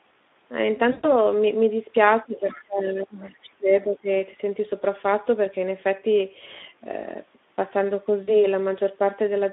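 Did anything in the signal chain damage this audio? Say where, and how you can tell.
Yes. Codec stage: throughout, a hoarse, noisy texture in a 200 Hz to 3.6 kHz band marks Speex coding at 11 kbps, distinct from steady network damage.

Network stage: at 0.91–1.12 s (120 ms) and 8.23–8.42 s (40 ms), packet loss concealed by the speech codec stretches the sound into a fading buzzy tone or coloured noise rather than leaving silence.

Call processing: from 2.25 to 4.09 s the speech dips by about 20 dB in pieces, about 1.5 s in all. This is likely speech suppressed in double talk, unlike a steady level fault.

Call processing: at 2.37–2.59 s a faint second voice sits about 25 dB below the talker, likely the other side's voice leaking through past the echo canceller.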